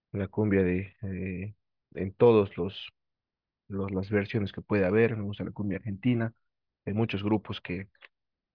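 Nothing stands out as a technical fault here; the speech comes through steady from beginning to end without any break or glitch worth pointing to.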